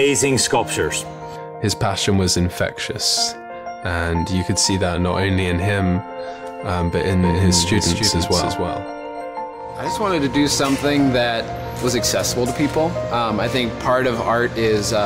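From 7.23 to 9.21 s a doubled audio track appears: a full-band copy trails the sound by roughly 300 ms at about 5 dB lower, likely from a second, slower capture path. It starts and stops abruptly, and a spectrogram shows every feature repeated, shifted right.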